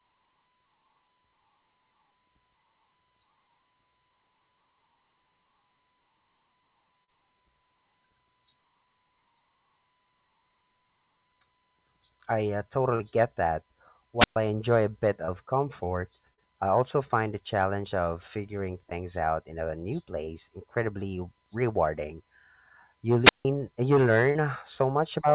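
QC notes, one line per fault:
7.04, 12.96, 15.25, 16.34, 18.90, 20.25, 24.31 s: short concealed packet loss. Gaps of 20 to 40 ms were patched by extending the previous sound. Each is heard as a brief smear or wobble.
14.18–14.36 s and 23.22–23.46 s: wireless microphone squelch dropout. The radio signal faded, hiss rose, and the receiver muted for about 0.12 s and 0.16 s before the audio returned.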